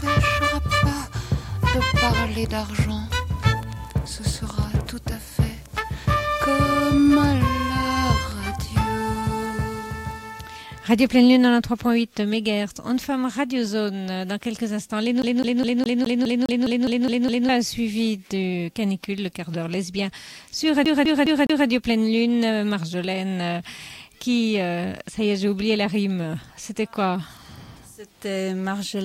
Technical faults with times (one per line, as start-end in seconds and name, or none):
15.22-17.49 CD stuck on one turn
20.85-21.67 CD stuck on one turn